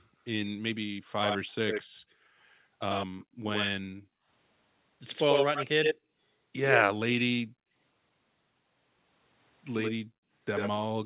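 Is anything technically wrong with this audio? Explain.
Yes, two faults recur through this speech clip.

Background gated by the echo canceller occurs from 1.0 to 2.24 s, 3.23 to 4.28 s, 5.99 to 6.2 s, 7.45 to 7.75 s and 10.0 to 10.32 s. While the far end's audio was playing from a loudspeaker, the echo canceller clamped the microphone down, so the room sound sinks by about 40 dB (about 19 dB in the shallower dip near 6 s) for a few tenths of a second at a time and then returns as the suppression releases.

Echo leak spans 1.24 to 3.7 s, 5.09 to 7.21 s, and 9.81 s to the end. A copy of the speech trails it by 85 ms. It is a little quieter than the direct speech in the first and last stretches and roughly as loud in the middle one. This is likely a loudspeaker-side echo canceller failing to remove everything its microphone picked up, so the residue travelled back down the call. The sound is narrowband, with nothing above 4 kHz, which fits 64 kbps G.711 telephone coding.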